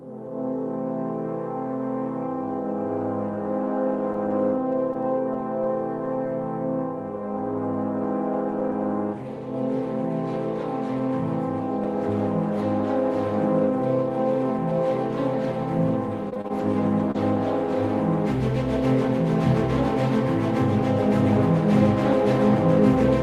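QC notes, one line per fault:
4.13–5.35 s, scattered short gaps: a few isolated packets went missing or arrived late, and the receiver bridged each hole by extending the preceding sound. Only about 20 ms in total is patched, with gaps around 10 ms, so the result is brief ticks or smears.
16.29–17.16 s, repeated packet loss (robotic sound): five gaps in quick succession, the longest 29 ms, are filled with 109 ms of extrapolated audio, about 13% of the span. The repeated concealment leaves the sound choppy, with fragments dropping out.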